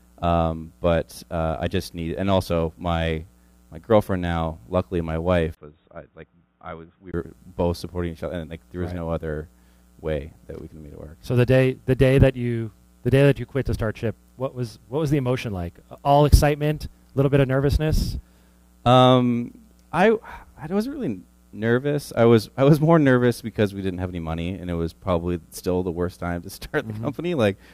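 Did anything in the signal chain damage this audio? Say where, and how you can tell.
Yes. At 5.55 s a gap of about 20 ms opens. Then the sound turns dull, with nothing above 3.8 kHz, until 7.14 s. Level drops roughly 10 dB, with a new noise floor around 45 dB down. The input was likely switched to a poorer device at the driver stage.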